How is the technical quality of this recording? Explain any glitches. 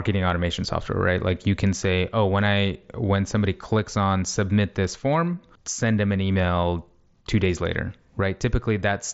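Nothing here counts as a glitch: the speech comes over a Bluetooth mSBC headset link, which caps the audio at around 7.7 kHz as that codec is meant to, and there's nothing else to flag.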